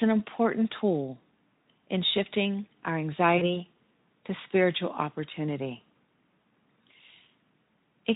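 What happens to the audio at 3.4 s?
VoIP packet loss concealed by the speech codec occurs from 3.37 to 3.49 s, right after "in shifting our". About 40 ms of audio went missing, which fits two lost 20 ms frames. The decoder filled the gap by extending its last pitch and spectral shape at falling gain, so the sound smears into a fading buzzy tone or coloured noise and stays weak briefly after the stream resumes.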